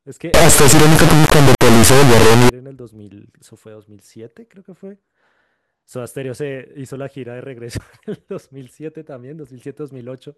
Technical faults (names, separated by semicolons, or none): integer read as float